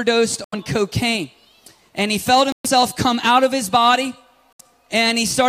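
The sound drops to dead silence three times, at 0.44 s for about 82 ms, at 2.52 s for about 124 ms and at 4.53 s for about 67 ms, then resumes, a Bluetooth stall pattern likely caused by delayed packets starving the headphone buffer. Each gap shows as a flat waveform and a blank vertical band on the spectrogram.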